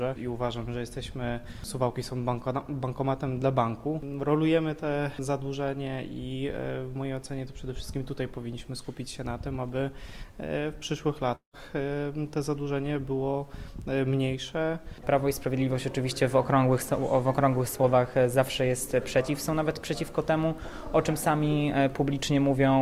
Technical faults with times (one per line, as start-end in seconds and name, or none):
11.35-11.55 long network dropout